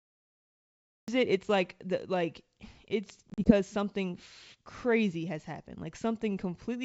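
The first 1.08 s is dead digital silence, and at 1.08 s the speech bursts in mid-syllable with a hard edge and no natural onset. This is a cut-off start: capture began late, so the opening of the utterance was never recorded.

Between 3.30 and 3.52 s the speech breaks into short, hard-edged gaps, about 80 ms of missing audio scattered over 160 ms, the longest run 40 ms. After each hole the sound returns slightly distorted before settling. This is packet loss on an ADPCM call, with the G.722 stream losing perhaps four packets. The lost audio was replaced by silence, and the decoder's adaptive predictor and step size drifted away from the sender's until they recovered.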